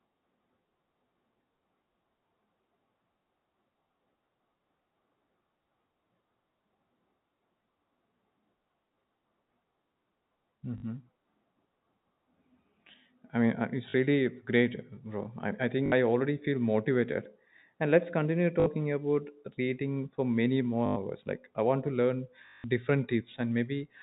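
Speech over a telephone-band link with packet loss where the last packet is repeated: brief robotic stutters at 10.78, 13.9, 15.86, 18.6, 20.86 and 22.46 s, lasting 40 to 180 ms, buzzing in a way that fits 20 ms packets.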